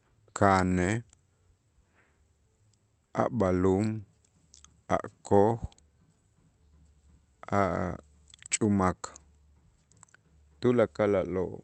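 No technical faults are audible.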